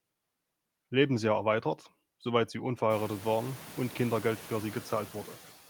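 Throughout the speech, background noise dips between words and swells beneath them: noise suppressor artifacts, from frame-by-frame band gating cutting the noise by about 13 dB, most audible after the room noise rises around 3 s.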